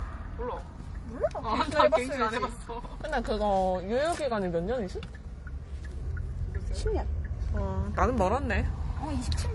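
Everyday sound here, and all the way through it carries the smeared, layered artefacts of transcoding between lossy codecs. Nothing survives above about 11.5 kHz, and the damage points to a low-rate MP3 likely re-encoded as HE-AAC, each pass stacking its own damage.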